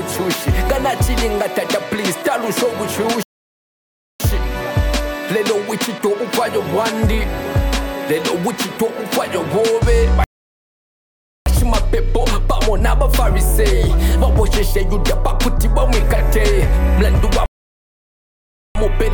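At 3.23 s, 10.24 s and 17.46 s the sound just drops out mid-flow, silent for about 0.97 s, 1.22 s and 1.29 s, then carries on. That's a playback stall, likely the player starving for data or its thread getting blocked until it recovered.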